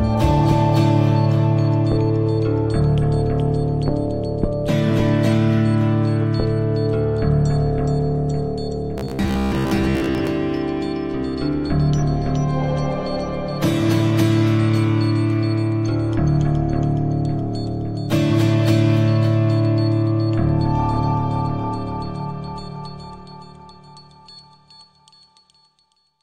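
From 8.98 to 10.28 s, robotic sound from repeated short buffers: a rigid, metallic 66.7 Hz buzz, likely from a 15 ms segment looped over most of that stretch. The spectrogram shows evenly spaced harmonic stripes, and the waveform repeats identical cycles.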